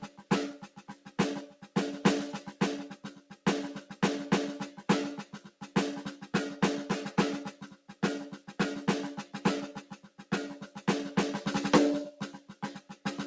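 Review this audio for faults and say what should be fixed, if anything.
A noise suppressor applied to music runs through the whole clip. It treats sustained tones and reverb tails as noise, so the level swings by roughly 10 dB while attacks pass. On a waveform the envelope pumps, and on the spectrogram, which is empty above 8 kHz as expected for a call path that fits G.722 at 64 kbps, held partials fade between onsets.

Sound is cut by the noise suppressor at 0.02–1.76, 2.95–3.45, 5.25–5.76, 7.52–8.03, 8.37–8.54, 9.79–10.32, 10.66–10.82 and 12.11 s to the end. The drops reach about 11 dB, or about 9 dB at 10.66 s, and decays end early. These sections appear as darkened vertical bands and a shrunken envelope.

To fix this, turn off speech noise suppression or switch to a music mode whenever music is sent.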